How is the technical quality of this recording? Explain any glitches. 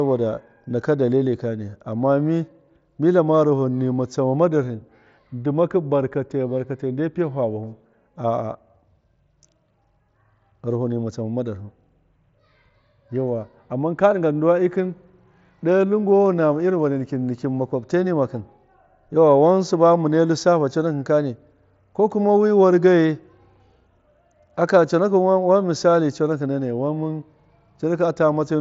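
The speech comes through without any glitches, carried over what sounds like a Bluetooth mSBC headset link, so nothing is present above 7.7 kHz and only the light graininess typical of that codec's roughly 61 kbps stream can be heard.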